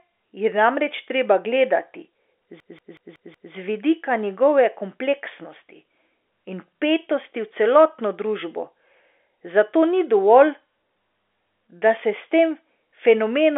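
Speech over a telephone line, band-limited by G.711 coding with nothing above 3.7 kHz, has a system hang loop from 2.60 to 3.53 s. A 186 ms slice repeats five times, a machine-gun stutter at 5.4 Hz. This fits a stalled driver cycling an 8192-sample buffer. On the waveform and spectrogram it appears as identical blocks tiled side by side.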